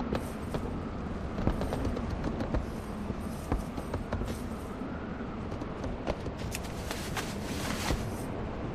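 No technical fault can be heard anywhere in this audio, and the signal stays intact and steady throughout.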